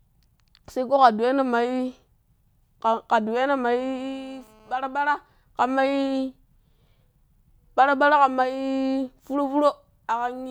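From 3.79 to 4.76 s there's a classic GSM phone buzz under the speech: a hard, raspy tone at about 217 Hz, packed with harmonics and completely unrelated to what's being said. A 2G handset on a call nearby was pulsing its transmitter 217 times a second, and something in the audio chain rectified those radio bursts into sound. Because it was a call rather than data, the buzz holds steady, sitting about 32 dB below the speech.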